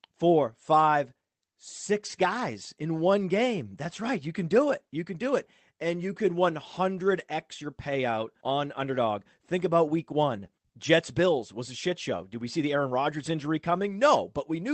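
No technical faults are audible.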